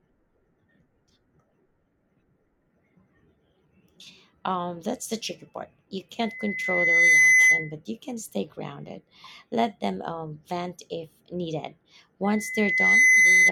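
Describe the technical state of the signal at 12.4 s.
At 12.4 s a loudspeaker feedback squeal is building. From 12.24 s to the end at 13.52 s, the microphone-speaker loop exceeds unity gain at 2 kHz, so that tone swells over about 0.7 s to roughly 15 dB above the speech. A steady interfering whistle would start at full level instead of growing.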